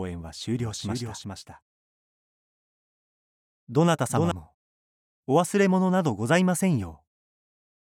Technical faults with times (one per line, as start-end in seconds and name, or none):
0.59-4.31 doubled audio track